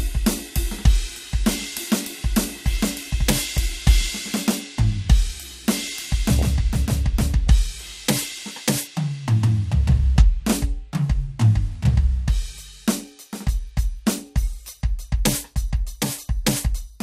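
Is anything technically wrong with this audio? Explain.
Yes. The music carries two faults.

Throughout, the music sounds dull, with a gurgling, granular edge. This is likely MP2 compression at a starved bitrate, around 80 kbps. Too few bits switch upper sub-bands off and coarsely quantise the rest. On a spectrogram the top end is cut away and blocky, flickering in and out.

DAB burbling appears as brief blips of noise at 3.57 s, from 6.39 to 6.42 s, and from 8.23 to 8.31 s. Bit errors that get past error correction corrupt samples and scale factors, so single sub-bands jump in level for up to a frame. A spectrogram shows isolated bright horizontal stripes, and the waveform shows small bursts.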